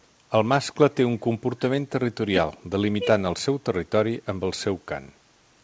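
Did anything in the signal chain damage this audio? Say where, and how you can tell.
No, the speech shows no damage from the signal chain.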